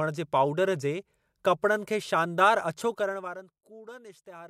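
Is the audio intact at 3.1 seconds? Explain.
No. At 3.1 seconds the speech sits inside a stretch of zipper noise from 2.84 to 3.56 s. The level falls by roughly 20 dB in unsmoothed 1 dB steps, about 30 per second, and each step clicks, producing an audible ticking zip.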